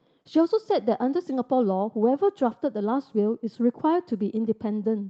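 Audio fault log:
1.02 to 2.41 s, call bitrate drop: the call's bandwidth estimate sagged and the encoder was pushed to a much leaner bit budget, which fits a fall from 32 kbps to around 18 kbps, held at its lowest for about 1.3 s. With fewer bits, Opus quantises the speech more coarsely, so this stretch turns rough and watery. The top end normally reaches about 8 kHz on this call path.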